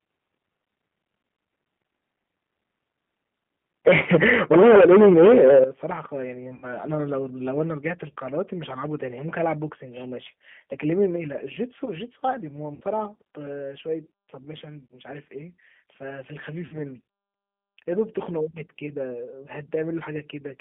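A speech recording that has passed through a narrowband VoIP link, carrying four separate kinds of technical fault. Throughout, the speech has been coded by what sounds like a G.729 codec, which fits an 8 kbit/s G.729A-type stream. It rebuilds each 10 ms frame from a vocal tract filter, a pitch predictor and a handful of pulses, and the line passes only about 150 Hz to 3.4 kHz. The result is dull, band-limited speech with a plainly audible rough, slightly synthetic grain. From 3.87 to 5.64 s there is microphone overload: the input was likely driven about 12 dB past full scale, so the tops of the waveform are flattened on something like a third of the samples, giving the loudest syllables a harsh, crackling edge. Around that stretch the level jumps down twice, which is likely the call software reacting with microphone volume stepped down. There is a drop of about 4 dB at 3.88 s, as the clipping begins, and a larger one of about 12 dB at 5.64 s, just as it ends, after which the speech and the background sit noticeably quieter. 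Finally, there is VoIP packet loss concealed by the speech codec at 6.54 to 6.70 s, 12.75 to 12.84 s, 14.86 to 14.95 s and 16.66 to 16.79 s, covering 80, 60, 40 and 60 ms of missing audio, consistent with runs of two to four lost packets. In each gap the decoder keeps extending its last pitch and filter with falling gain, so the sound smears into a fading buzzy tone or coloured noise, and the speech stays weak or distorted for tens of milliseconds or more after real packets resume.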